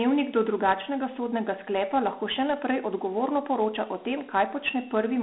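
Speech with Dialogic VOX ADPCM throughout: gritty hiss rides on the speech, and the spectrogram holds energy only between 250 Hz and 3.5 kHz, blank above 3.8 kHz.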